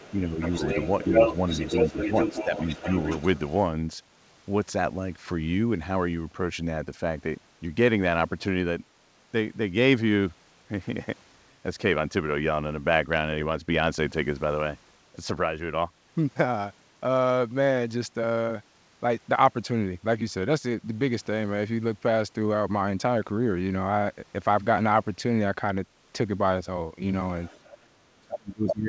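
From the start to 3.54 s a second voice runs under the speech at only slightly lower level, a few decibels down. This is the other side's voice leaking through: the far end likely played from a loudspeaker and reached the microphone, with the echo canceller failing to remove it. Within that stretch the main voice dips briefly at 0.25 s, 1.04 s, 1.69 to 1.95 s and 2.44 to 2.86 s, the last dip deepest at about 10 dB. This is speech suppressed in double talk: with both sides speaking, the canceller likely mistook the talker for echo and turned everything down.

Near the end the leak returns faintly from 27.43 to 27.85 s. From 27.85 s to the close, the talker drops steeply, by about 35 dB, again likely double-talk suppression, and at 28.67 s a short burst of the other voice comes through at full speech level. The whole clip carries nothing above 8 kHz, which fits a G.722 call path at 64 kbps.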